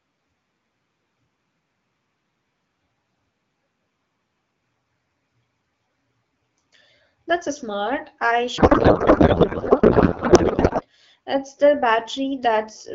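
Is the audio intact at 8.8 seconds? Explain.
No. A codec payload misread runs from 8.57 to 10.82 s, right after "a smart I". Octet-aligned AMR frames are unpacked as bandwidth-efficient, so every field lands in the wrong place, and the speech turns to garbled noise and warble that barely tracks it.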